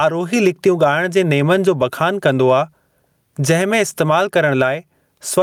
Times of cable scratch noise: none

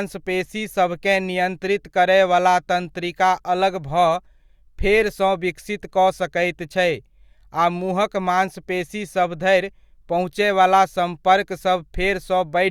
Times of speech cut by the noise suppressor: none

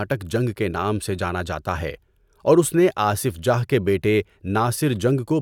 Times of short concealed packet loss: none

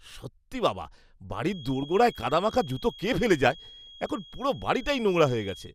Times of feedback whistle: 1.41-5.74

